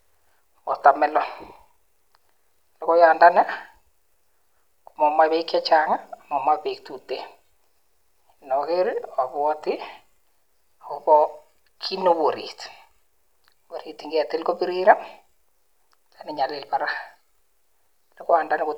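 Nothing technical goes wrong anywhere in this stretch of speech, so there's no fault to point to at any moment along the way.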